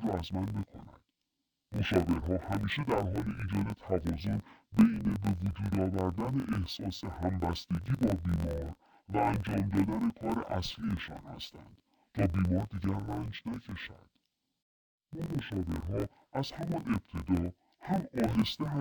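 Throughout, the speech shows interleaved audio read as planar. Each 21.77 ms block's mixed samples play as halves, sounding an octave low and dull, buzzing at 45.9 Hz.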